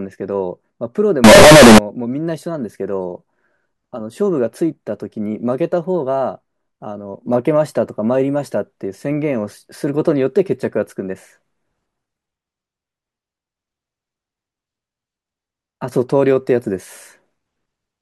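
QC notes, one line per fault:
1.24–1.78 s, float read as integer: a sudden, very loud, harsh near-square waveform at an almost fixed, high level, with background noise as loud as the speech but pitch still traceable. Likely cause is 32-bit float samples read as integers, so sign and exponent bits set each value.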